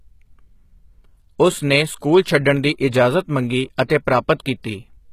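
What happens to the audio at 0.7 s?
The treble at 0.7 s, as everywhere in this speech clip, sounds bright but synthetic: s sounds come out gritty and lispy, with nothing above about 14.9 kHz. This is likely HE-AAC compression at a very low rate, around 20 kbps, where the upper band is rebuilt by copying lower bands upward under a coarse envelope. Unlike a plain low-pass, the top isn't dull; the copied harmonics fail to line up, giving a metallic edge.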